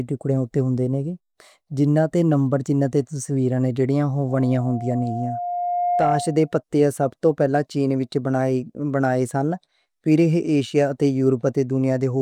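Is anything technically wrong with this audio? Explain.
Yes, there is loudspeaker feedback squeal from 4.28 to 6.55 s, just before "پتے سب توں پہلاں". The microphone re-amplifies its own loudspeaker, so a 707 Hz tone swells over about a second and a half to roughly speech level. That gradual swell sets it apart from a steady hum.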